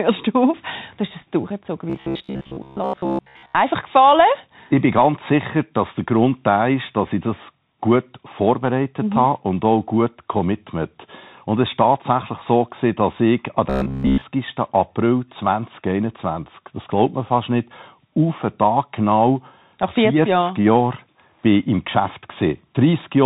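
Bluetooth CVSD headset codec damage runs through the whole speech recording and is plainly audible. The sound points to a 64 kbps headset link in which each sample is coded as a single up-or-down bit with an adapting step size. Everything above 4 kHz is gone, which leaves a boxed-in, telephone-like band. Loud, bright passages outrun the step and distort, s sounds come out scratchy, and a granular hiss sits beneath the speech.

Robotic sound from repeated short buffers appears from 1.90 to 3.56 s, right after "hast das durchgezogen", and again from 13.70 to 14.25 s, following "gewesen dass ich an". During both stretches the speech collapses into a rigid, metallic buzz at 66.7 Hz. It still roughly tracks the syllables. That buzz period is 15 ms, which fits a 15 ms buffer being replayed over and over. The likely cause is fresh audio arriving too seldom, so the playback side repeats the last chunk in its place, and most of the real audio in each stretch is lost.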